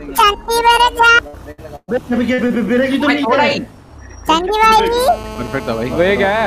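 Between 1.27 and 1.90 s the sound stalls three times, at 1.27–1.35 s, 1.51–1.60 s and 1.76–1.90 s. Each time the last sound is stretched and fades, and the last gap drops to silence for about 40 ms before the audio returns. This is burst of packet loss: about 60, 60 and then 120 ms of audio never arrived, so the receiver extended what it had and skipped ahead.

At 2.34–2.40 s and again at 2.48–2.52 s there are briefer smears, a wobble rather than a dropout. This is short concealed packet loss. Roughly 40 ms and then 20 ms went missing, and the decoder patched each hole by continuing the preceding sound before blending back into the real signal.

From 4.98 s to the end, a hard, raspy buzz sits under the audio at about 15 dB below the signal, steady and unrelated to it. This is GSM phone buzz. A nearby 2G phone on a call transmits in 217 Hz bursts, and the audio circuitry rectifies those radio pulses into a harmonic-rich tone.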